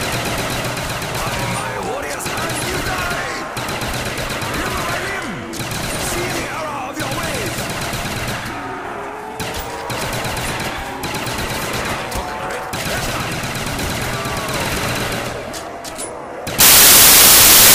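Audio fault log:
16.60 to 17.74 s, samples built from the wrong bytes: the reader assembles each sample from mismatched bytes, so the rapidly changing low-order bits land in the high part of every value. The last second or so turns into loud, harsh broadband noise.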